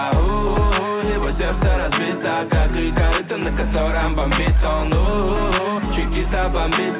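No technical faults turn up anywhere in the clip. The sound passed through a WebRTC call path and has the narrowband telephone character of that route, with nothing above 4 kHz, which fits a G.711 mu-law codec.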